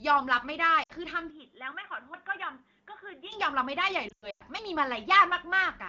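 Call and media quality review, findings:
Lost AMR speech frames, 0.83–0.92 s: speech dropping to near silence within two frames, about 60 ms concealed, which fits three 20 ms frames failing checksum. Decoder repeats last good pitch and vocal tract parameters at decaying gain; speech resumes weak or rough for a moment.

Input switched to a poorer device, 1.3–3.32 s: sound turns dull and boxy, nothing above 3.8 kHz, level down about 5 dB, new noise floor about 45 dB below signal, no gap at either switch. Likely a mid-call change to a narrowband microphone or headset call profile.

Audio missing between chunks, 2.14 s: abrupt skip, roughly 50 ms removed, both sides spliced with no silence. Likely a chunked recorder or processor dropping samples at a block boundary, which fits a 2.5 s chunk cycle.

Lost AMR speech frames, 4.09–4.42 s: speech dropping to near silence within two frames. About 220 ms lost, scattered over 320 ms, longest run 100 ms. 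Wideband concealment runs out quickly over the longest gap, and speech returns weak and rough afterward. Light AMR-WB coding damage, consistent with a mid-to-high wideband rate.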